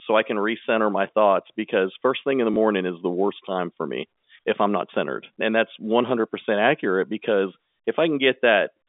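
Packet loss with the last packet repeated occurs at 2.54 to 2.56 s in this speech clip, between "first thing in the" and "is the worst time". A 20 ms gap, which fits a single lost packet, was filled by replaying the previous packet. This single repeat sounds like a small blip. The line itself carries G.711 telephone coding, limited to roughly 250 Hz to 3.6 kHz.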